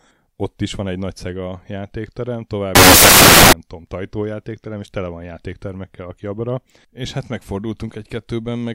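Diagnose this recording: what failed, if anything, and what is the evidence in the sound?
Samples built from the wrong bytes, 2.75 to 3.53 s, right after "nagy szega játékterem tovább": the speech gives way to loud, harsh broadband noise at the sample-format conversion stage. The bytes of each sample were assembled misaligned or in swapped order, so the rapidly changing low bits became the dominant part of each value.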